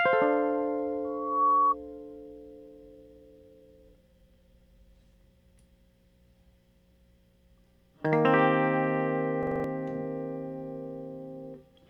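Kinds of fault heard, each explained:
Loudspeaker feedback squeal: A microphone is hearing the loudspeaker it drives. At one pitch the loop gain passes unity, so that tone feeds itself and keeps growing. Here a single tone near 1.1 kHz rises out of the music at about 1.04 s. It swells over roughly 0.4 s until it sits around 5 dB above the music. It stops at about 1.75 s.
System hang loop: The computer or driver stalled while the sound hardware kept replaying the same ring buffer. One short slice of audio repeats exactly instead of moving on. From 9.43 s to 9.64 s, a 42.67 ms fragment plays five times in a row. That makes a rapid stutter at 23.4 Hz, which fits a 2048-sample buffer. About a fifth of a second of music is missing.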